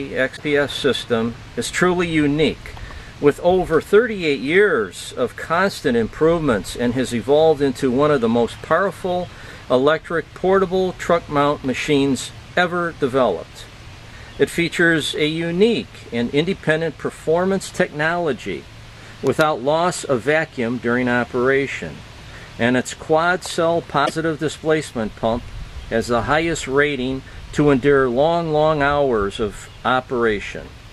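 Two brief glitches skip the audio ahead, at 0.35–0.40 s and 24.05–24.10 s. This is likely a broken MP3 bit reservoir after frames of about 26.1 ms were cut.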